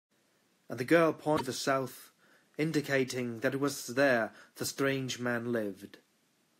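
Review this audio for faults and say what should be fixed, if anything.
Damaged data in a compressed stream, 1.33 to 1.41 s: corrupt bytes knock the decoder out of frame sync, producing a brief glitch before it relocks. To prevent it, re-encode from an intact source and verify checksums or use error-checked transfer so the compressed bytes arrive unaltered.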